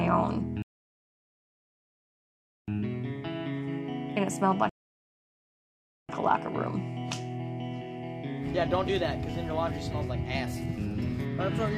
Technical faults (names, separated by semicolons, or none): rebuffering stall